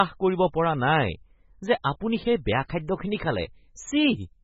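Across the whole recording the speech sounds watery and swirly, with a metallic chirping edge on sibilants and nothing at all above 7.5 kHz, so the top end is dull and boxed in. The likely cause is heavy MP3 compression at a very low rate, which fits a bitrate around 16 kbps. Short of bits, the encoder chops off the treble and drops faint frequency components that flicker in and out from frame to frame, producing that unstable, warbling texture.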